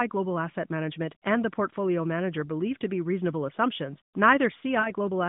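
Right near the end, from 4.80 to 4.92 s, there's a short patch of lost AMR speech frames. About 40 ms of audio went missing, which fits two 20 ms frames failing their checks over the radio link. The decoder papered over the gap by repeating the last good pitch and vocal-tract settings at dropping gain, so you hear a brief smeared, warbly dip before the speech recovers, a bit thin at first. All of this sits inside narrowband AMR audio topping out around 3.7 kHz.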